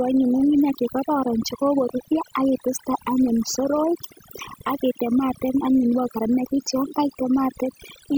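From start to finish, the speech carries overdone noise removal: an aggressive noise reducer has gated individual frequency bins, leaving near-silent gaps dotted with twinkling specks. On a spectrogram, the background shows isolated flickering dots, and the harmonics look patchy and eroded.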